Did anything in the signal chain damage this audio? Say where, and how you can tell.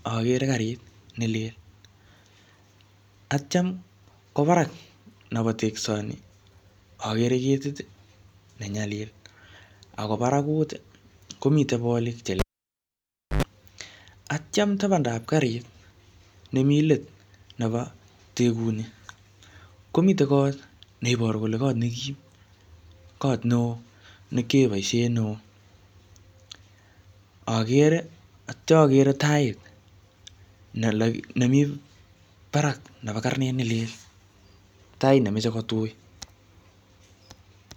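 Yes, in the analogue wiring: a cable pulled and plugged in at 12.39–13.43 s. A pop spike, a flat 0.98 s gap, 91 ms of 50 Hz buzz stripes as the tip touched, then a second pop.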